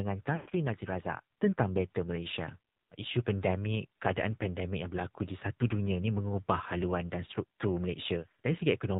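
Across the whole clip the speech comes through the AMR narrowband mobile codec at 7.4 kbps. The audio is confined below 4 kHz, and at this low rate the vocal-tract model and sparse pulse excitation leave the voice plainly buzzy and synthetic. Unlike a simple low-pass filter, which only dulls the sound, this codec adds a coarse, artificial texture to the speech itself, and any background sound takes on a swirling warble.

From 0.36 to 0.53 s, lost AMR speech frames interrupt the speech. About 140 ms of audio is missing across a 160 ms stretch, which fits roughly seven dropped 20 ms frames, and the longest unbroken run is 120 ms. Through that run the decoder repeats the last good pitch and spectral settings at falling gain, so the sound smears into a drawn-out buzz that fades toward silence. The speech then returns briefly weak or rough. A plain dropout would cut abruptly to silence. A packet-loss concealment scheme that repeats waveform segments would stutter. 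This fault instead stretches the sound as it fades.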